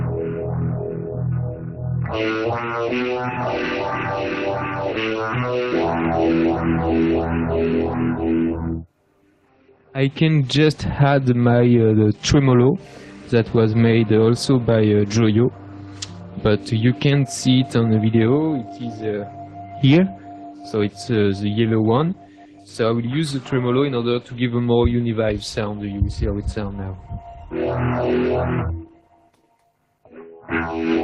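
No technical faults can be heard in this clip.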